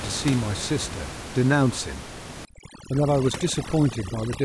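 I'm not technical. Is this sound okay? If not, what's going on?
No. From about 2.45 seconds to the end, the clip has overdone noise removal: a noise reduction tool was set too strong and shuts down any slice of the sound that comes close to its idea of background hiss, taking the softer parts of the voice with it. The room noise under the speech drops and breaks up, with small twinkling specks left behind.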